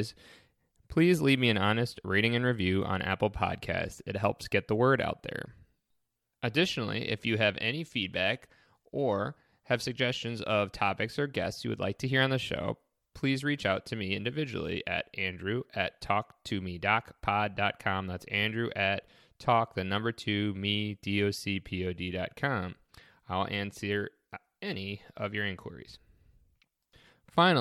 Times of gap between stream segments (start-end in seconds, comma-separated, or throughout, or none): none